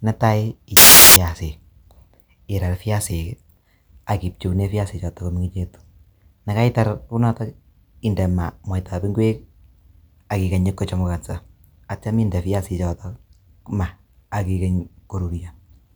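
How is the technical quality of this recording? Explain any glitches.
The recording has one glitch, near the start. Samples built from the wrong bytes, 0.77 to 1.16 s: misassembled bytes promote low bits to dominant values, producing a burst of loud, harsh broadband noise.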